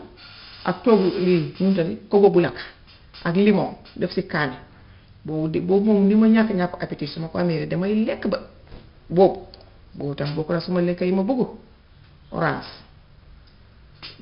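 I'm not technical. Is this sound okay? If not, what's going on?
No. Throughout the speech there is 4-bit ADPCM compression. Each sample is stored as a coarse step from a guess, so a gritty hiss rides on every loud sound and sharp attacks crunch. Nothing above about 5.3 kHz remains, which points to a low sample rate and leaves the speech dull.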